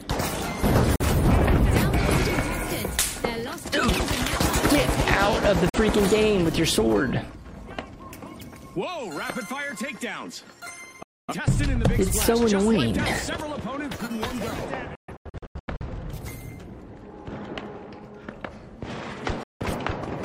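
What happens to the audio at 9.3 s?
Nothing goes wrong at 9.3 s; the audio plays through that moment intact, with no dropout, click, glitch or distortion.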